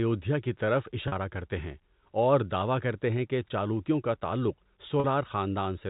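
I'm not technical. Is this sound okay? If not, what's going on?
No, there are two brief dropouts, both from packet loss with pitch repetition. At 1.08 s, right after "کی طرف" and before "کرتے ہیں اور دعوی", and again at 5.0 s, just after "کہ چالوکیوں کا تعلق", about 40 ms of the speech went missing in transit. The receiving end papered over each gap by replaying the last tiny cycle of the voice, so you hear a quick, slightly buzzy hold instead of silence. The audio is also carried over ordinary telephone-style G.711 coding.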